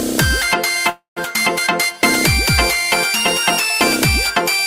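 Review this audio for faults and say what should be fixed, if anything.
There's a call audio freeze from 0.89 to 1.19 s. The sound stalls, the last bit is stretched into a fading buzz that drops to silence for about 130 ms, then picks up where it left off. Nothing is lost, but everything after runs about 270 ms late. The likely cause is delayed packets draining the jitter buffer. To prevent it, give the jitter buffer more headroom or fix whatever is holding up packets on the network path.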